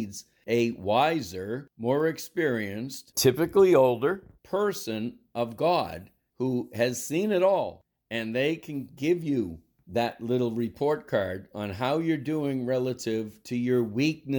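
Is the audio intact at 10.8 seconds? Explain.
Yes, at 10.8 seconds the speech plays through cleanly with no dropout, click, distortion or other fault.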